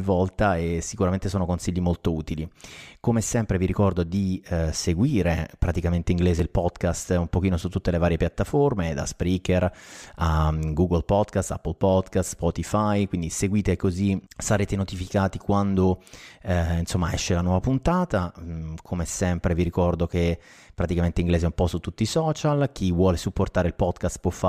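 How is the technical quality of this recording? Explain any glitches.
There is one glitch, a block of digital silence at 6.39 s, right after "eh seguire praticamente inglese". For about 1.45 ms the speech drops straight to silence and back with no fade, which fits a 64-sample buffer that was not filled in time. Both hard edges land so close together that it is heard as a single sharp tick.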